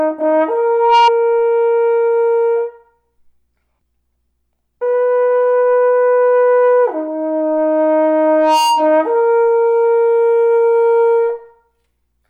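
At 0.69 s a loudspeaker feedback squeal kicks in: the mic is catching its own speaker, and the loop runs away at 938 Hz, swelling in about a third of a second to sit a bit above the sound until 1.11 s. It returns at 8.27 to 9.05 s, same pitch, roughly level with everything else.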